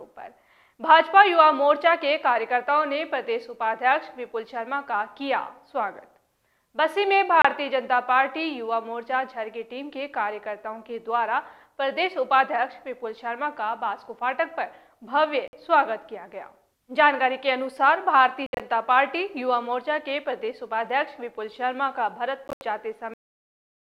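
Packets most likely failed to reach the Bluetooth headphones in time and were discarded, causing Bluetooth dropouts. Each one is a hard-edged hole in the sound, with playback resuming further along as if it had kept running. The holes come at 7.42 to 7.45 s (about 27 ms lost), 15.48 to 15.53 s (about 53 ms), and 18.46 to 18.60 s and 22.48 to 22.61 s. In the last two, short gaps are scattered across about 133 ms, with the longest runs lasting 67 ms and 80 ms.

The final buffers were never written, which leaves a cut-off end. At 23.14 s the audio stops mid-sound and drops straight into digital silence with no natural decay. The silence runs to the end of the clip.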